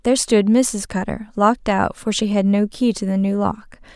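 No technical faults can be heard in this recording.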